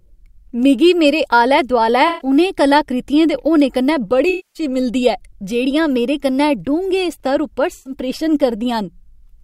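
AAC frame loss with concealment at 2.07–2.28 s, 4.29–4.63 s and 7.73–7.93 s: the decoder rebuilds missing frames from the last good spectrum, leaving smeared, noisy patches, the longest at 4.29 s.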